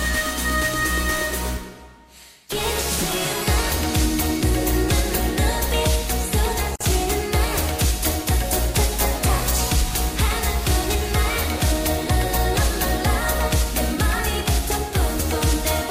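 Separately encoded pieces of audio were joined without trimming the encoder's start-up delay and the padding on each piece's last frame, which leaves a gap at a join of encoded pieces. At 6.76 s the continuous sound drops out for about 49 ms, until 6.81 s. It is a brief hole with edges smeared by the codec, and the sound then picks up where it stopped. The timing suggests pieces about 10 s long.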